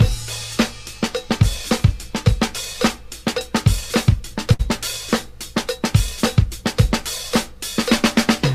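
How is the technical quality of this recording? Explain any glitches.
One glitch stands out: a short stall from a late packet between 4.53 and 4.61 s. A packet failed to arrive on time, so the jitter buffer ran dry and the receiver stretched the last stretch of sound for about 58 ms until the data showed up, then resumed from exactly where it left off. Nothing is lost, but the sound hangs unnaturally with a faint buzzy, slightly dipped quality, and everything afterwards plays 58 ms later than before.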